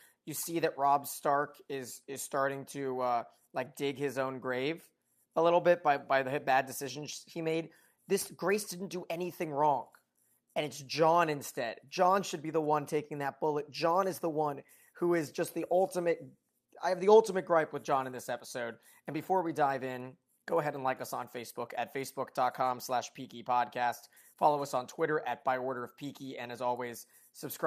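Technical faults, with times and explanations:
No technical faults can be heard anywhere in this speech recording. Nothing in it calls for a time or an explanation.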